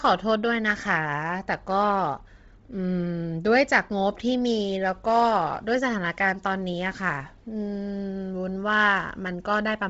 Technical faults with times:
0.00-9.90 Bluetooth LC3 compression

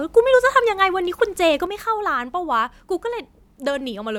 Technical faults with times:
1.67-4.19 sudden gain jump

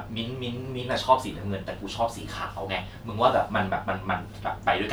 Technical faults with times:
none

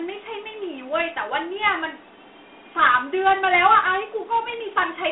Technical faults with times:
0.00-5.11 Dialogic VOX ADPCM

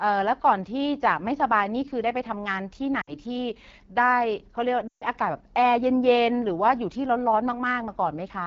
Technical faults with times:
0.00-8.47 AMR wideband (HD Voice) codec
3.02-3.16 lost AMR speech frames
4.87-5.05 lost AMR speech frames

